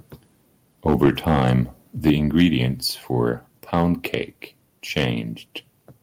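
From 0.88 to 1.53 s the loudest syllables take on a harsh, crackling edge, which is microphone overload. The input was likely set so high that peaks ran about 7 dB past the converter's limit, and a small share of samples had their tops sliced off. On a waveform those peaks appear as flat plateaus where the converter's limit cut them. On a spectrogram, smeared high-frequency energy runs up above the harmonics on each clipped syllable.

The same crunch returns in brief bursts at 2.06 to 2.11 s, where about 5 dB over the limit flattens roughly a tenth of the samples in that short stretch, and again at 2.37 to 2.45 s, 3.73 to 3.85 s and 4.97 to 5.05 s, each about 3 to 4 dB over. All of these show the same squared-off tops and upward spray of distortion.

At 2.1 s, right on the heels of that distorted burst, the microphone volume is stepped down. The call software likely detected the clipping and cut the device's input gain by about 4 dB in a single move, so the voice and the background drop together at that instant rather than fading. 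A waveform shows the envelope, noise floor included, stepping to a lower height at that point. On a spectrogram, every band darkens at once along a sharp vertical edge.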